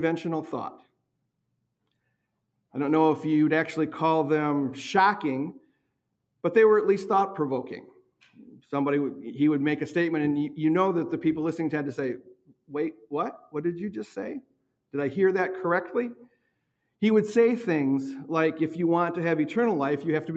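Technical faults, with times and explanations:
Throughout: noise suppressor applied to music or sounds. A speech-tuned suppressor keeps treating held, steady parts as noise, so the level wobbles by a few dB.
0.82–2.12, 5.57–5.97, 7.99–8.37, 12.18–12.73, 12.92–13.13, 13.38–13.55, 14.41–14.75 and 16.21–16.64 s: sound cut by the noise suppressor. Sustained stretches sink by about 17 to 19 dB at worst while sudden onsets mostly get through.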